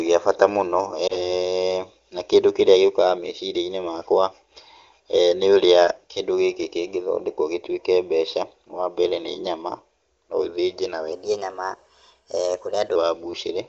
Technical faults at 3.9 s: none

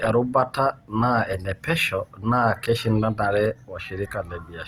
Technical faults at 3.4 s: Opus compression

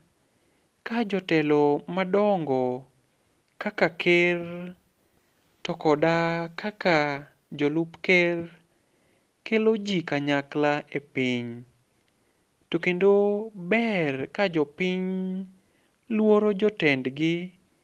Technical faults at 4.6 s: none

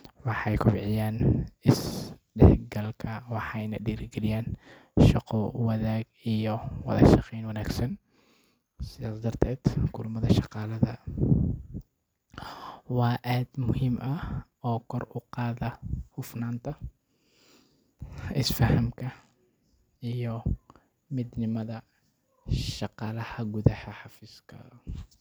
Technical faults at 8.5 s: drift correction step

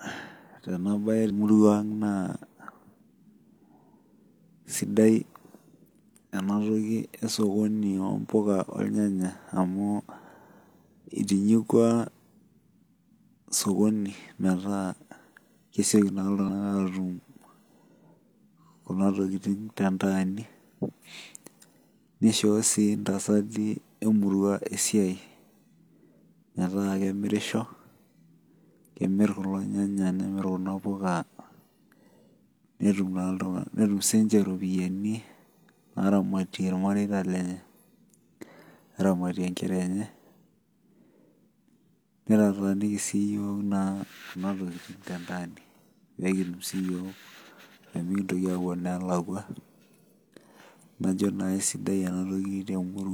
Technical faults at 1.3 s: damaged data in a compressed stream

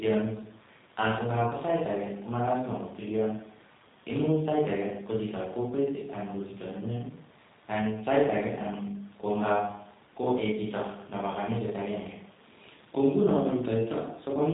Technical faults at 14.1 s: G.729 codec

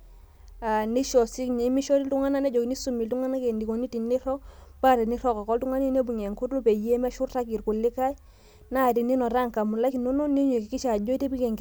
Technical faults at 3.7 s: none

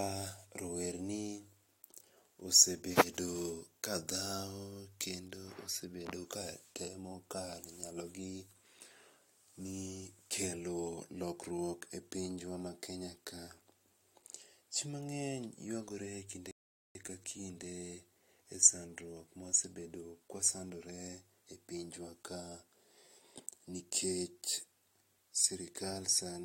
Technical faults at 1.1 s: none

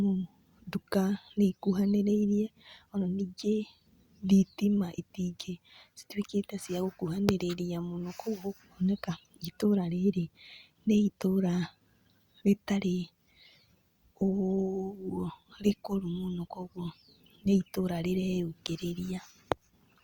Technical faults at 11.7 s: none

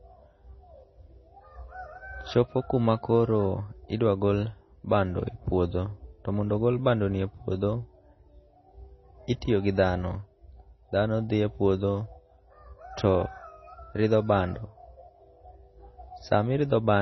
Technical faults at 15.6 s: MP3 compression

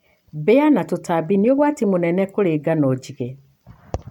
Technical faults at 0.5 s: none

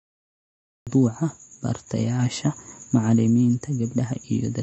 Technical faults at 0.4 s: MP3 compression; cut-off start

